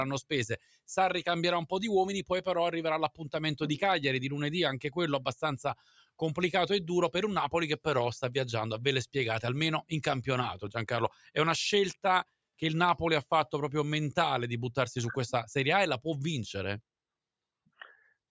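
Running through a speech-oriented noise suppressor, the audio has its steady tones, ambience and decaying tails treated as noise and turned down, so the level breathes by a few decibels throughout, with onsets passing and sustained parts sinking. This noise suppressor applied to music or sounds differs from a compressor: a compressor reacts to loudness and ducks the loud attacks, while this processing reacts to steadiness and leaves attacks intact while the held material fades and flutters.

At three points the suppressor cuts the sound much harder. From 0.58 to 0.88 s the level falls by about 14 dB. From 5.75 to 6.21 s it falls by about 15 dB. From 11.10 to 11.31 s it falls by about 8 dB. In each case the sound sinks in level. Unlike a network dropout, the sound does not vanish abruptly into silence. It sinks selectively, and sudden transients inside the span mostly come through.

At 10.67 s there is a DC step. 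The waveform's zero line jumps, likely from a converter recalibrating or an offset input being switched in, and the offset then bleeds away through a 2 Hz high-pass over a fraction of a second. It is heard as a low thump or click with no change to the sound around it, which separates it from a digital click or a dropout that actually interrupts the material.

The call microphone processing trims the deepest bass and leaves nothing above 8 kHz.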